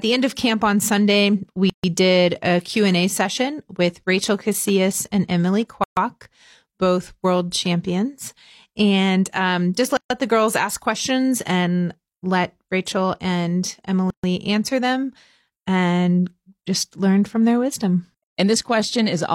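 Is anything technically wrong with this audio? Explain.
Yes. There are gaps at joins of encoded pieces at 1.70–1.84, 5.84–5.97, 9.97–10.10, 14.10–14.24 and 18.24–18.37 s, recurring every 4.0 s. Each is a hole of about 140 ms at first, then 133 ms, with smeared edges, after which the sound resumes exactly where it stopped. Separately encoded segments were joined with the encoder's start delay and last-frame padding left in. The strict 4-second regularity and near-identical lengths distinguish this from network dropouts, which fall irregularly and vary in length.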